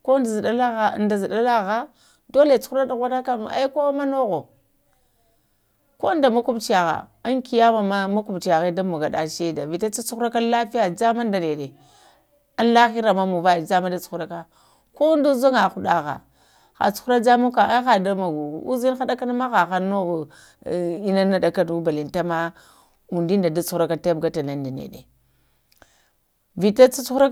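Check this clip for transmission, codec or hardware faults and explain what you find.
Nothing in the recording points to a transmission, codec or hardware fault, and the speech signal stays intact and continuous throughout.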